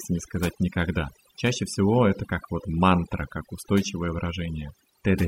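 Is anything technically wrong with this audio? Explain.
Yes. Throughout the speech there is overdone noise removal: a noise reduction process applied far too aggressively to a noisy recording. It estimates the noise floor and pulls down or removes individual frequency bands whenever they sit close to that estimate, and the quieter components of the speech are cut along with the noise. The background drops and breaks up into twinkling specks.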